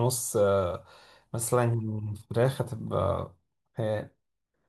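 No technical faults can be heard in this recording.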